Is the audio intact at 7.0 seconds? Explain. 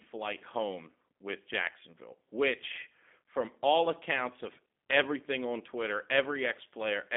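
No, not really. At 7.0 seconds you're still hearing the G.729 codec damage that runs through the whole speech clip. The speech has been rebuilt from a vocal tract filter, a pitch predictor and a few pulses per short frame, which fits an 8 kbit/s stream. It comes across plainly rough and a bit synthetic. The band is squeezed to roughly 200 Hz to 3.6 kHz, with nothing at all above 3.7 kHz, so it sounds thin and phone-like.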